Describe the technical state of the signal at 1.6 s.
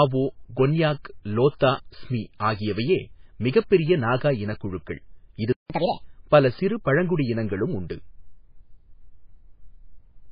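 Right around 1.6 s there's a pre-echo, running from about 1.59 to 1.61 s, so roughly 21 ms. A sharp attack lands late in a transform block, and because the codec spreads its quantisation noise across the whole block, noise scaled for the loud onset leaks into the quiet stretch just ahead of it. You hear a short burst of hiss before the attack, and the attack itself comes across soft and smeared.

That moment also sits inside damage that covers the whole speech clip, with the heavy, watery, swirly texture of MP3 compression. Weak frequency components flicker in and out from frame to frame, sibilants pick up a metallic chirp, and nothing survives above 5 kHz, so the top end sounds dull and boxed in. All of that points to a very low bitrate, something that fits around 16 kbps, which is likely also what starved the block around 1.6 s and made the pre-echo audible.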